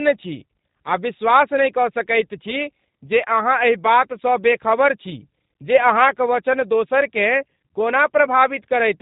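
Throughout, the speech has passed through the G.729 codec, which discards the actual waveform and rebuilds each 10 ms frame from a vocal tract filter, a pitch predictor and a few sparse pulses. Everything above 3.8 kHz is gone, so consonants lose their crispness, and the rebuilt excitation gives voiced sounds a plainly audible rough, buzzy, slightly synthetic edge. The thin, coded character fits a low-rate 8 kbit/s VoIP stream.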